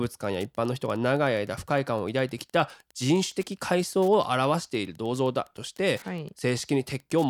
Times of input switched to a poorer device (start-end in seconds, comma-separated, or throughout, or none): none